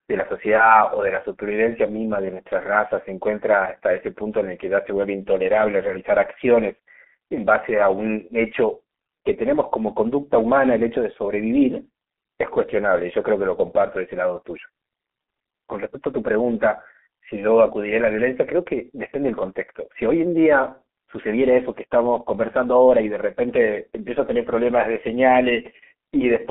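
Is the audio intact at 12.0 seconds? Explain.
No, at 12.0 seconds the speech is still running through the G.723.1 codec damage that covers the whole clip. The sound is squeezed into a narrow telephone band, roughly 250 Hz to 3.4 kHz, so it's muffled and thin. The codec models the voice in coarse 30 ms chunks and updates slowly, which fits a rate around 6.3 kbit/s. The damage is heavy, with a hoarse texture and consonants smeared together.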